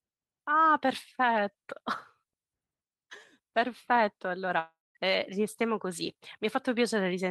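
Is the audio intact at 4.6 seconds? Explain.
No, a long network dropout runs from 4.59 to 4.97 s: likely lost packets, heard as a fading buzz, then about 200 ms silence. Spectrograms show smeared bands dissolving into blankness.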